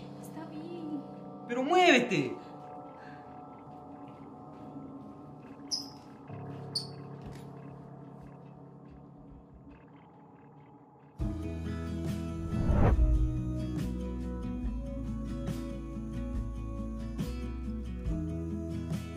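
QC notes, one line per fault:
No technical faults can be heard anywhere in the signal.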